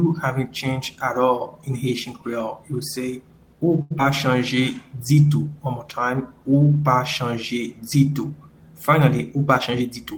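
The audio has three closely spaced delivery faults. At 3.81 to 3.92 s, a short stall from a late packet holds the last sound for 90 ms with nothing lost, showing as a flat, smeared band on the spectrogram. At 3.98 to 4.01 s, a short concealed packet loss leaves a brief smear where about 40 ms never arrived, and the receiver shed roughly 30 ms of delay. On the waveform this looks like a small discontinuity. From 4.55 to 4.90 s, a jitter buffer slow-down stretches the audio to 89% speed at unchanged pitch, adding 43 ms of repeated periods that appear as duplicated cycles on the waveform.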